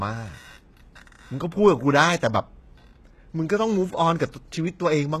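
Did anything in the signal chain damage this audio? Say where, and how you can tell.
Yes, at the codec stage, and it runs the whole way through the speech. The s sounds come out gritty and lispy, with a metallic sheen on the top end, and there's nothing at all above about 12.3 kHz. That's likely HE-AAC compression at a low bitrate, something like 16 kbps: the encoder keeps only the lower spectrum and fakes the treble by copying lower bands upward, so the harmonics don't line up and sibilants turn rough.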